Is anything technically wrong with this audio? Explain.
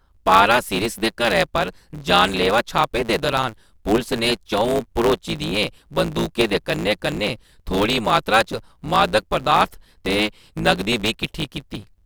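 Yes. Throughout the speech there is a steady buzz at 109 Hz, and everything runs about 1.16 times too fast while keeping roughly its normal pitch. This is a truncated block size mismatch: each block, consistent with 512 samples, loses its tail before the next stage reads it.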